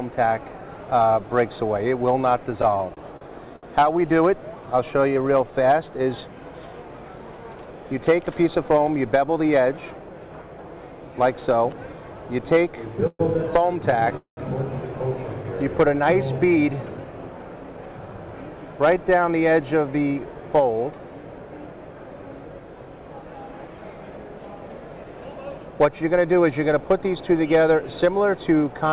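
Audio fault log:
2.62–3.65 s and 13.00–14.13 s, repeated stalls (stutter): packets kept arriving late, so the jitter buffer ran dry again and again, and each time the receiver stretched the last sound until data returned. The first run has 8 gaps totalling 186 ms (longest 67 ms, 18% of the span). The second has 6 gaps totalling 165 ms (longest 124 ms, 15%). Nothing is lost, only delayed. Unlike a single freeze, the sound catches repeatedly in short hitches, giving a dragging, stuttering motion.
4.91–5.52 s, jitter buffer slow-down: the buffer needed more reserve, so the receiver repeated single pitch periods or slivers of pauses many times in a row, adding 89 ms and running the sound at 87% speed with pitch unchanged. Unlike the stutter, there are no hitches or fills. The sound is drawn out smoothly, and the stretch is spread across the whole passage.
7.49–8.65 s and 16.56–18.00 s, jitter buffer speed-up: the buffer held more than its target delay, so the receiver trimmed short pieces of one or a few pitch periods many times over. 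That removes roughly 0.1 s in the first passage, at 109% speed, and roughly 0.2 s in the second, at 112%. The pitch stays the same, so the sound seems hurried rather than raised. Unlike a dropout, there is no audible jump or missing chunk.
14.17–14.39 s, call audio freeze: right after the second stutter run, the sound stops advancing for 202 ms. The last sound is carried on and then gives way to about 130 ms of silence before the audio resumes exactly where it left off, with nothing missing. The likely cause is packets held up in transit emptying the jitter buffer. This is one longer halt, not a chain of brief catches, and it adds 202 ms of delay. Throughout, the G.711 call path leaves nothing above 4 kHz.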